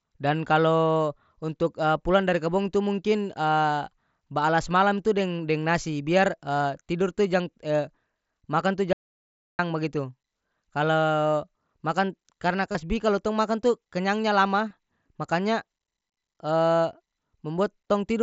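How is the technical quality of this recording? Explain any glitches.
The speech has three glitches: one stretch of dead silence and two brief concealed packet losses on what sounds like a wideband Bluetooth headset link, whose 8 kHz ceiling and faint graininess on louder sounds come through as expected.

Audio dropout to silence, 8.93 to 9.59 s, right after "makan tu": the input was likely cut off for about 0.66 s while recording continued, so silence was written. The speech stops abruptly, with no room tone in the gap, and whatever was said is lost.

Concealed Bluetooth headset packet loss, 12.72 to 12.75 s and at 14.69 s: voice packets between headset and phone went missing, and the receiver filled each hole by repeating the best-matching recent waveform. The first gap, about 30 ms, which fits four lost frames, gives a short buzzy tone at full level and a slight warble as real speech resumes. 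The second, about 15 ms, is a briefer version of the same.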